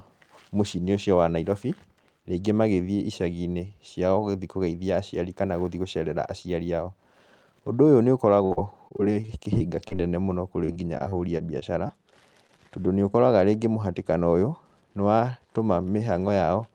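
From 8.34 to 10.13 s, 10.65 to 11.91 s and 12.47 to 13.15 s, repeated packet loss (robotic sound) chops the speech: brief holes up to 52 ms are filled by repeating the last sound, giving choppy sound with pieces missing. Spectrograms show smeared, repeated frames; waveforms show abrupt gaps.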